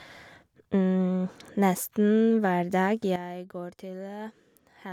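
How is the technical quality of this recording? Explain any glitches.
The recording has one clear glitch: a sudden gain jump in the speech at 3.16 s. The digital gain was most likely changed between one sample and the next, as when a level setting or bit shift takes effect instantly with no ramp. The level drops by about 11 dB at that point and stays there until the clip ends. Because the whole signal is scaled at once, the speech and the background noise fall together in a single abrupt step.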